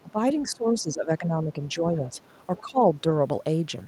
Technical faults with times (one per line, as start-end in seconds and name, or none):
0.00-0.11 other side's voice leaking through
0.03-2.14 speech suppressed in double talk
2.56-2.61 other side's voice leaking through
2.60-2.84 speech suppressed in double talk